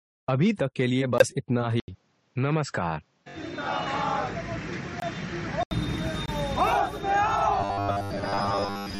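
At 1.18 s there's an abrupt 40 ms hole, which fits a couple of corrupt frames the decoder rejected and the player muted, with timing kept. At 1.8 s, after an 80 ms gap, the sound turns dull and boxy with a faint new noise floor at about the same level, likely an input switched to a poorer device, lasting until 5.71 s. The same muted-frame dropout hits again at 5.00 s and 6.26 s, each 30 to 40 ms of sudden silence. From 7.61 s to the end it goes robotic, a rigid metallic 100 Hz buzz from repeated short buffers. That fits 10 ms chunks looping while most of the real audio is skipped.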